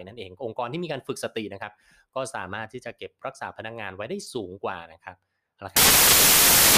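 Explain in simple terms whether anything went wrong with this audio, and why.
From 5.77 s to the end of the clip, the speech turns into loud, harsh noise. This is samples built from the wrong bytes. The player joined each sample's bytes in the wrong order or position. The tiny, fast-changing parts became huge, so noise swamps the sound.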